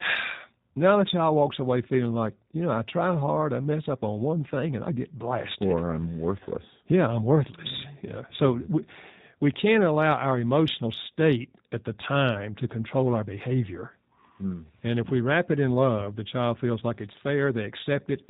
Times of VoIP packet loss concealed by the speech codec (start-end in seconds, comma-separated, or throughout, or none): 6.43-6.49